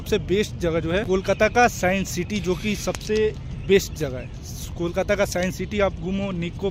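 From 1.23 s to 5.40 s, word clock ticks recur about every one and a half seconds, sharp single-sample slips from an unlocked receiving clock running roughly 15 ppm off the sender's.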